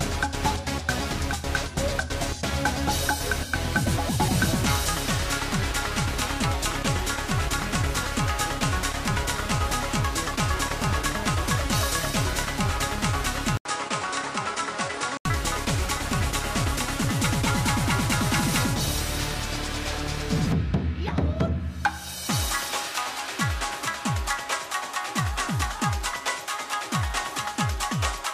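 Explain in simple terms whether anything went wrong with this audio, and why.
Around 13.57 s there's a brief gap, then the sound turns dull and a bit quieter until 15.25 s, likely an input switched to a poorer device.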